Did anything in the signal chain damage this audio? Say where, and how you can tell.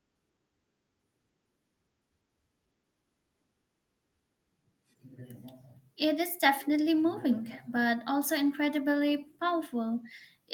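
No, nothing in the chain damaged this speech; the only trace of the call path is a top end that stops near 12 kHz, the expected band limit of an Opus call codec at a modest bitrate.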